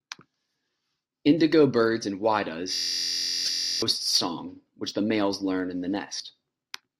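From 2.74 to 3.82 s a system hang loop replaces the audio: a single 23.2 ms slice, consistent with a 1024-sample ring buffer, repeats about 50 times while the system is stalled. At a 43.1 Hz loop rate it comes across as a steady buzz. About a second of material is lost before the sound resumes at "song which the males".

Damaged data in the compressed stream produces two brief disruptions, at 3.45–3.49 s (inside the loop) and at 6.17–6.20 s, right after "males learn in the". At each point corrupted frames left the decoder misreading its input and hunting for the next valid frame header.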